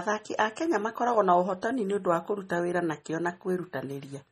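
MP3 compression damage runs throughout the speech, from start to finish. The treble stops dead at 14 kHz, and the heavy smearing points to a low bitrate, likely around 32 kbps. With so few bits, the encoder discards quiet frequency detail and lets weaker components flicker in and out from frame to frame. That gives the speech a watery, swirling texture, metallic chirps on s sounds, and softened, blurred consonant attacks.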